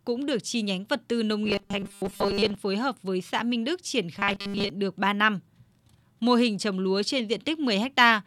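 The speech is likely being starved of fresh audio, so a buffer about 5 ms long keeps repeating in place of most of the real signal. The result is robotic sound from repeated short buffers, a rigid metallic 200 Hz buzz, from 1.45 to 2.55 s (between "nhánh vật tư nông" and "phối hợp với xã") and from 4.19 to 4.70 s.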